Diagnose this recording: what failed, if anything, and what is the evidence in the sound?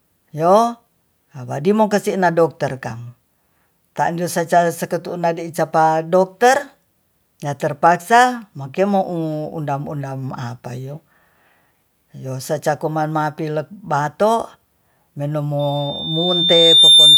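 Loudspeaker feedback squeal, in the acoustic loop between loudspeaker and microphone. At 15.59 s a 3.6 kHz tone appears and swells for about a second and a half. It runs to the end, roughly 10 dB above the speech. There, loop gain exceeded one.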